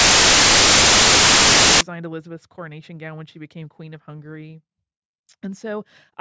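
A speech clip that opens with file tags played as audio: from 0.00 to 1.81 s, the bytes of an embedded cover picture are decoded as samples, and because that image data is compressed it comes out as very loud white noise with abrupt edges. On a waveform this is a solid block of very high level; a spectrogram shows uniform broadband fill across all frequencies, starting and stopping sharply.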